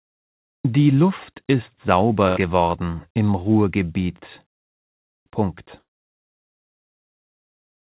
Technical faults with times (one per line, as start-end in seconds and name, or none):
2.28-2.45 burst of packet loss
5.79-5.90 burst of packet loss